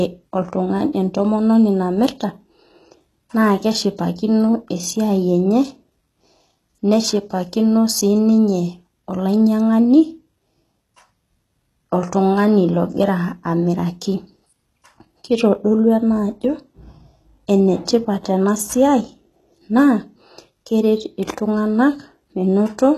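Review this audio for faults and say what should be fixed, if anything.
Throughout the speech, the treble is rebuilt rather than real, and it stops at 12.4 kHz. S sounds come out gritty, metallic or lispy. The likely cause is HE-AAC compression, which copies lower bands upward, so harmonics misalign. The damage is plainly audible and fits a bitrate around 16 kbps. Encode at a higher bitrate, or with plain AAC or a lossless format, to prevent it.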